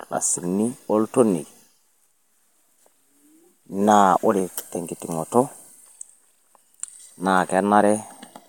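A short recording of speech, with no audible technical faults. Nothing in the signal calls for a time mark or a cause.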